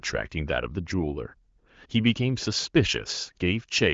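Nothing stood out on listening to this speech; the only audible trait is the bandwidth of an HD Voice call, with nothing above about 7.5 kHz.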